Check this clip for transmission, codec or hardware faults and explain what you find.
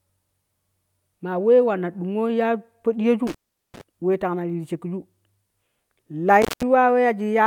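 Two hardware dropouts are audible in the speech. Both are an intermittent contact fault. The first runs from 3.27 to 3.81 s, with the line open for about 0.40 s. The second runs from 6.42 to 6.63 s, open for about 0.17 s. A loose cable or plug briefly loses connection, so the signal path breaks. The speech drops out abruptly. Crackle marks each edge as the contact scrapes open and shut. Faint hiss fills the gap.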